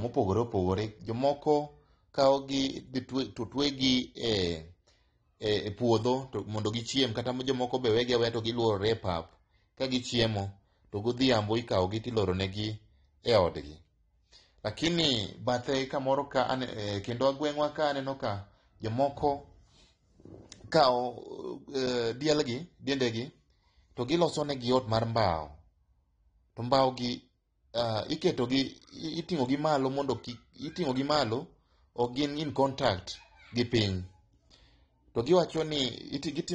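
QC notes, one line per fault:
Throughout, AAC compression: no content above 9.8 kHz, with dull, smeared, warbling sibilants, likely coarse AAC-LC quantisation at a bitrate that fits about 32 kbps.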